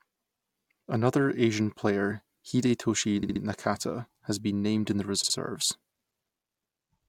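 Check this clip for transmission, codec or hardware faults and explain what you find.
The speech has two repeated-frames faults. At 3.22–3.41 s a 64 ms block replays three extra times, and at 5.23–5.35 s, right after "has been named in", it replays twice more. The stream resent the same compressed frames, so the decoder plays that slice again, stretching the audio by 192 ms and 128 ms. Unlike a dropout, nothing is lost; identical sound recurs.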